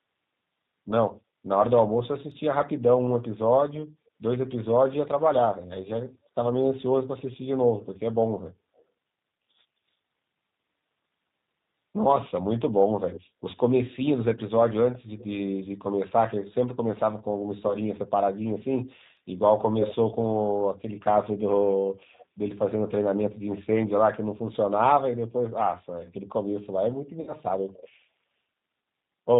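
Throughout, the speech sounds slightly rough and synthetic, with nothing above 4 kHz. This is the G.729 codec at 8 kbit/s, which rebuilds each 10 ms frame from a vocal tract filter, a pitch predictor and a handful of pulses, so the damage is plainly audible.

From 17.68 to 17.75 s the speech smears into a short buzzy tone or coloured noise that fades, then stays weak or distorted briefly. From 27.21 to 27.33 s a longer, more fading stretch follows. This is VoIP packet loss concealed by the speech codec. About 20 ms and then 60 ms of audio went missing, which fits one and then three lost packets. The decoder extended its last pitch and filter at falling gain, and recovery lagged because each frame builds on the one before.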